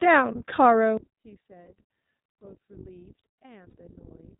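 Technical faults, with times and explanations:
Throughout, iLBC codec: The speech passes through a narrowband VoIP codec that codes each short frame's excitation independently. The steady, slightly coarse texture suggests 20 ms frames, which fits iLBC's 15.2 kbps mode. Everything above 4 kHz is cut away, so the speech sounds dull and boxed-in. The coding damage is plainly audible as a rough, somewhat synthetic grain laid over the speech.
0.97 to 4.39 s, one channel inverted: From 0.97 s to the end, the level drops by about 25 dB and the speech turns faint. The likely cause is one stereo channel with reversed polarity. When the channels are folded to mono, the shared centre content cancels, and only the small difference between the two sides survives. That leaves a weak residue instead of full-bodied speech.
1.66 to 1.68 s and 3.70 to 3.76 s, lost iLBC frames: Packets failed to arrive, and the decoder filled each gap by repeating the last pitch cycle mixed with noise. 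The first gap lasts 20 ms and the second 40 ms, which points to one and then two lost frames. Each shows up as a brief held, slightly buzzy or breathy vowel-like smear. Because every iLBC frame decodes on its own, the voice is right again almost at once after each gap.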